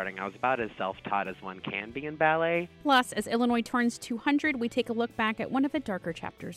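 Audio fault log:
No fault to log; none can be heard anywhere in the audio.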